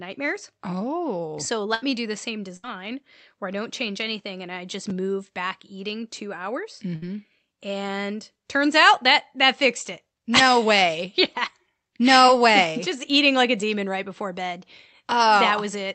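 Speech carried over a call link, with Opus-style coding noise and a spectrum that stops at about 8 kHz, is interrupted three times by a burst of packet loss. At 1.74 to 1.83 s, just before "me do the same", and at 2.56 to 2.64 s, just after it, roughly 70 ms of audio never arrived. The receiver stretched the last sound into a short buzz or hiss and faded it down, then jumped ahead with that stretch of speech gone. The third burst, at 6.95 to 7.03 s after "two hours", drops about 60 ms the same way. On a spectrogram each burst shows as a smooth smear of the preceding sound thinning to darkness, then an abrupt restart. On the waveform the fill appears as a decaying continuation of the prior audio. At 4.89 s there are chunks out of order: a piece of roughly 5 ms played two chunks late, so the audio is briefly shuffled rather than lost. The three hard joins give a brief garbled moment, visible as sharp vertical lines on the spectrogram and small discontinuities in the waveform. 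At 12.28 s a short concealed packet loss left about 10 ms missing, which the decoder patched with a brief synthetic continuation before blending back. It is audible as a brief smear and appears as a slight blur in the spectrogram's fine structure.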